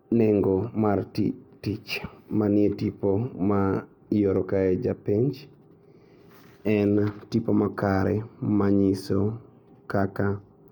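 No technical faults are audible.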